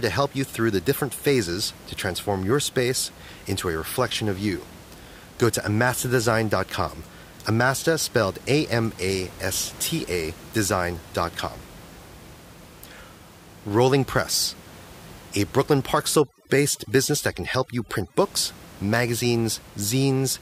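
From 16.19 to 18.19 s the speech runs through overdone noise removal. The reducer is set so hard that any frequency band sitting near its noise estimate is pulled far down or shut off, taking the quieter parts of the voice with it. The room noise, about 21 dB below the speech before this point, drops and breaks up into twinkling specks. A spectrogram shows scattered isolated dots where the noise floor was and ragged holes in the speech harmonics.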